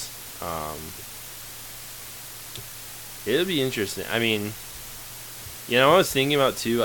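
Throughout, low bit depth with dither reduces the speech to 6 bits, turning rounding error into a steady, even hiss about 15 dB down, without distortion.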